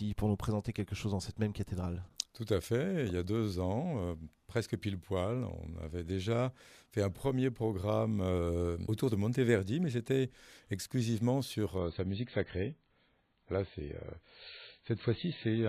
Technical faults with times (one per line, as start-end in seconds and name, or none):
11.78-15.68 adaptive stream at a lower bitrate